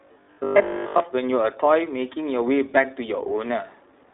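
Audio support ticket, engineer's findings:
iLBC codec throughout: band-limited, slightly rough, synthetic speech. Spectrogram shows a hard ceiling near 3.7 kHz. The narrowband VoIP coding fits the 20 ms, 15.2 kbps iLBC mode.

0.02 to 1.0 s: robotic sound from repeated short buffers, a rigid metallic buzz at 50 Hz. Likely starved playback buffer looping 20 ms chunks over most of the span. The waveform shows identical repeating cycles, and the spectrogram shows evenly spaced 50 Hz harmonic lines.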